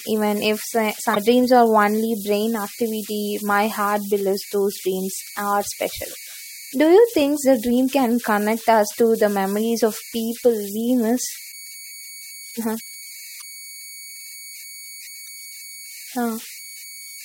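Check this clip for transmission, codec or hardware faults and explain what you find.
Two faults are present: a converter tone running under the whole clip, and four short bursts of corrupted compressed data.

Converter idle tones run throughout: a whistle around 2 kHz, about 18 dB below the speech, clearest in pauses and as grain under quiet speech. An undithered delta-sigma converter given very small input falls into repeating bit patterns that produce this tone. Unlike mains hum, it sits high rather than on low 50 or 60 Hz harmonics.

Damaged data in a compressed stream appears at 1.12–1.17 s, 11.49–11.54 s, 13.38–13.43 s and 15.23–15.28 s, each about 50 ms. Corrupted bytes make the decoder misread frames and lose sync while it hunts for the next header, giving a brief chirp or squawk.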